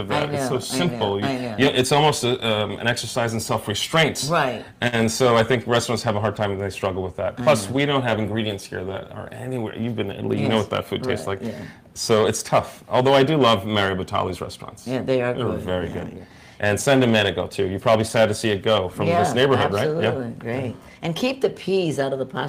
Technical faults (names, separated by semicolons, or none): hard clipping; short stall from a late packet; jitter buffer speed-up